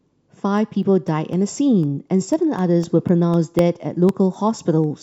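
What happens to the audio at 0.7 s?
At 0.7 s the speech falls within a run of periodic USB or driver dropouts lasting from 0.08 to 4.84 s. Every 0.25 s a blocked bus or driver drops roughly half a millisecond to silence, giving regular ticks. The waveform shows tiny flat gaps; the spectrogram shows thin vertical broadband lines.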